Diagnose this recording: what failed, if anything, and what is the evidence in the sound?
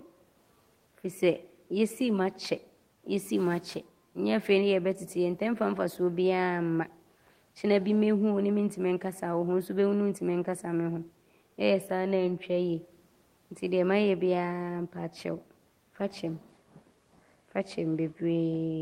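Nothing failed in this recording; the only thing under the speech is the room's own background noise, about 42 dB below it.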